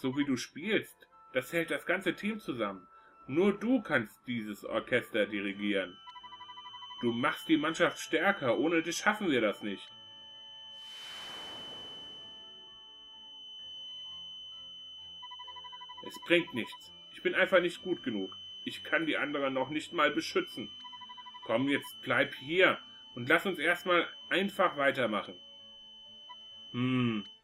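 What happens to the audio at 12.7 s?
At 12.7 s a feedback whistle sits behind the sound: a thin, steady 3 kHz tone, about 20 dB below the signal, swelling and fading slowly, running from 5.49 s to the end. It likely comes from a loudspeaker-to-microphone loop held just short of runaway, so unlike a howl it never grows.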